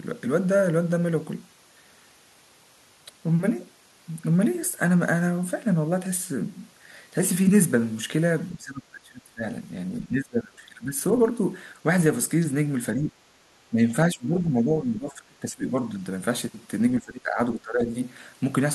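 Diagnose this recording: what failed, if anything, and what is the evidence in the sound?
Call processing likely failed during double talk, and the result is speech suppressed in double talk. The echo canceller seems to have mistaken the talker for loudspeaker echo and turned the speech down hard, by up to about 20 dB, at 8.55–9.46, 10.0–10.99, 12.93–13.15, 13.7–13.88, 14.12–15.75 and 16.99–17.93 s.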